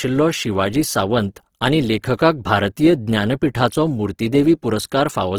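Throughout the speech there is plainly audible damage, likely from Opus compression: consonants and vowels turn grainy and rough rather than swirling as MP3 would, while the spectrum still reaches about 20.3 kHz, which fits Opus's music mode running near 16 kbps.

At 2.17 s, between "शिवाजी सांवत आनी" and "भारतीय ज्ञानपिठाचो", a pre-echo appears: quantisation noise meant for a sharp onset spills about 17 ms ahead of it, so a short hiss precedes the attack, which sounds softened. Unlike a click, it leads into the onset rather than sitting apart from it.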